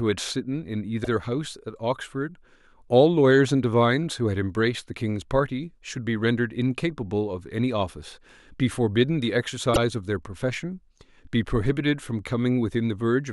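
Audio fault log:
1.03–1.09 s, repeated frames: a block of about 52 ms plays twice, which fits two compressed frames of roughly 26 ms each. The audio stutters. On the waveform the same short shape appears twice in a row, and the spectrogram shows a duplicated slice.
9.73–9.77 s, repeated frames: about 26 ms, likely a single frame, plays again. It is a briefer hiccup, seen as a repeated sliver of waveform and a duplicated slice on the spectrogram.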